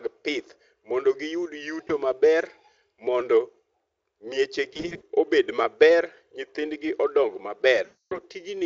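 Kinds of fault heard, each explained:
VoIP packet loss concealed by the speech codec: chunks of the stream went missing and the decoder papered over them by stretching its last pitch and filter while fading the gain. Just after "mondo giyud" at 1.87 s it's a tiny 20 ms blip. Around 4.73 to 5.02 s short gaps of up to 40 ms pile up into a smeared stretch. From 7.85 to 8.20 s 260 ms of lost audio becomes a stretched sound that fades. The Speex coding underneath sounds clean, pointing to a fairly high quality setting.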